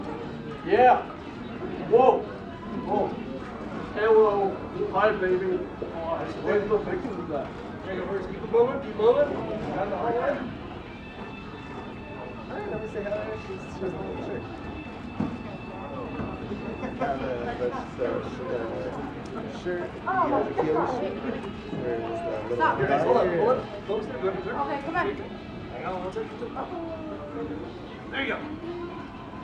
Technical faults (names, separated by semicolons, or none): none